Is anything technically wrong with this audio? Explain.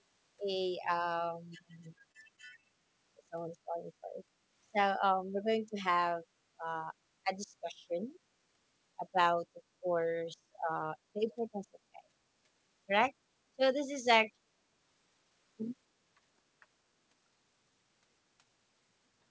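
Yes, two faults are audible in this speech clip.

From 1.88 to 2.65 s there are repeated stalls (stutter): packets arrived late, the jitter buffer ran dry six times, and the receiver stretched the preceding sound to cover about 95 ms, the longest gap 28 ms. Nothing is lost, but delivery drags and hiccups. A spectrogram shows short smeared, repeated frames.

From 16.83 to 17.37 s a jitter buffer speed-up occurs: with too much audio queued, the receiver cut out pitch-period-sized slices, removing roughly 50 ms and running about 10% fast at unchanged pitch. The speech sounds hurried, and the waveform shows whole cycles removed with cycle length and harmonics steady.

The call path's G.722 codec leaves nothing above 8 kHz, which is a flat ceiling on a spectrogram and expected for this path.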